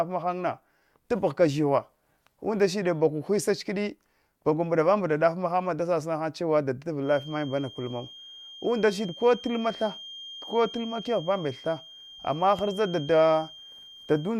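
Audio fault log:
6.98–14.39 s, feedback whistle: a thin, steady tone near 3.2 kHz appears under the speech and runs to the end, sitting roughly 20 dB below it and swelling and fading slowly in level. Likely a speaker-to-mic loop hovering just at the edge of feedback.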